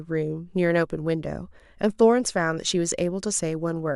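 At 2.91 s, a Bluetooth LE Audio frame goes missing and the LC3 decoder has to cover the gap, which makes this a case of lost LE Audio frames. With nothing to decode, it repeats the previous frame's spectrum with its signs scrambled, so the harmonic structure of the speech becomes noise for about 7.5 ms, which fits a single dropped frame. It sounds like a tiny rough tick or smeared graininess in the speech.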